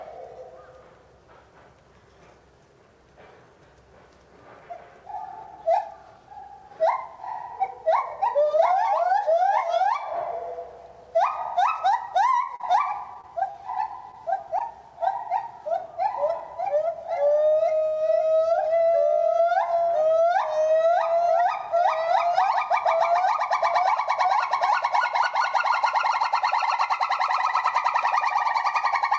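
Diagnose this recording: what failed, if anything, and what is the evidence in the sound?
Scattered short gaps between 12.56 and 14.62 s point to the network stage: about seven lost or late packets, 80 ms missing, the longest gap around 40 ms, each patched by continuing the last sound. A spectrogram shows brief held columns below the call codec's 8 kHz cutoff, and the waveform shows short repeated stretches.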